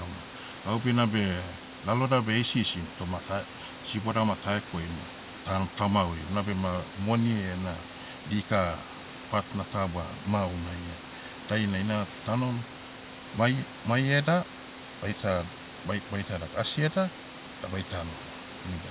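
The speech sits about 19 dB above a room noise and is band-limited with nothing above 4 kHz, which fits a narrowband telephone codec such as G.711 A-law on a call path, and nothing in the signal departs from what that chain normally produces.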